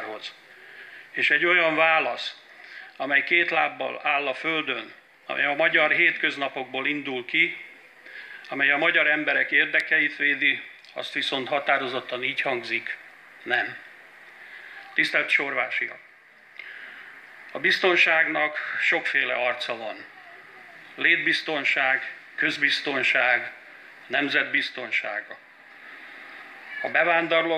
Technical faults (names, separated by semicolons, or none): none